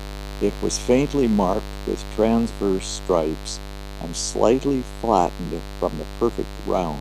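A speech recording carries mains buzz from start to finish, a steady raspy drone sitting roughly 10 dB below the voice. Its fundamental is 50 Hz, and sharp spikes entering twice per mains cycle spread harmonics up into the several-kHz range. That is why it rasps rather than hums: a plain ground-loop hum stays a smooth, low 50 Hz tone, whereas this edge points to a dimmer, rectifier or unshielded cable injecting the spikes.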